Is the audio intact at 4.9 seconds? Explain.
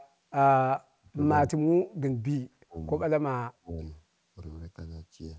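Yes, at 4.9 seconds the speech is intact, with no dropout, glitch or other fault at that moment.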